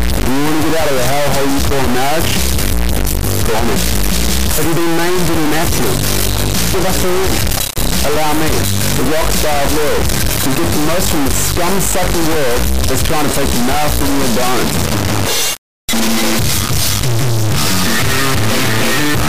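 Throughout, integer read as float: 32-bit integer samples decoded as 32-bit float, so output lurches between silence and clipping, giving a harsh, extremely loud buzzing square wave.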